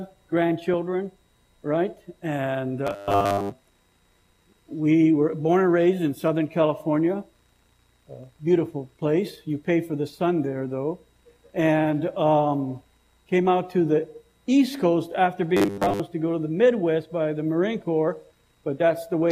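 From 2.87 to 3.53 s, and again from 15.57 to 16.00 s, the sound turns into a rigid metallic buzz at 100 Hz. This is robotic sound from repeated short buffers. The likely cause is a 10 ms chunk being replayed while most of the real audio is skipped.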